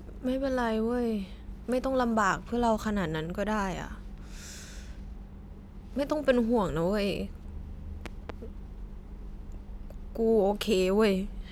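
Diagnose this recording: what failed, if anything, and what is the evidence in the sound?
A loud pop hits at 8.06 to 8.32 s: two sharp thumps in quick succession, peaking about 10 dB above the speech, which carries on underneath. The likely cause is a voltage spike in the analogue wiring, from a plug, switch or static discharge.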